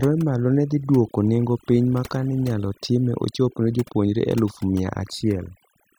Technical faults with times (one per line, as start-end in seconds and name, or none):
0.00-5.99 overdone noise removal